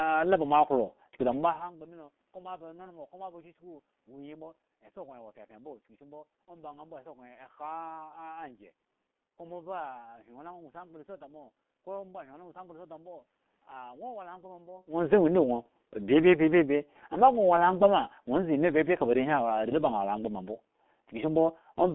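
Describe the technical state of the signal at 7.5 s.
At 7.5 s the speech carries G.723.1 codec damage, present throughout the whole clip rather than starting or stopping near this point. The codec models the voice in 30 ms frames at very low rate, and the heavy hoarseness points to roughly 6 kbit/s. The band runs only from 200 Hz to 3.4 kHz, so the speech is muffled and rough and its consonants are smeared. A plain telephone-band filter would sound muffled but clean, without this gritty, slowly updated roughness.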